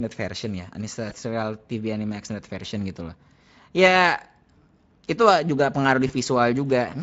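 Two brief glitches break up the speech: at 1.09 to 1.13 s, and at 6.07 to 6.12 s just after "itu juga pengaruh", the sound smears into a short buzzy tone or coloured noise that fades before recovering. This is VoIP packet loss concealed by the speech codec. When packets went missing, the Speex decoder stretched its last pitch and filter with falling gain, and each gap fits a single lost 20 ms frame. The Speex coding itself adds only light damage.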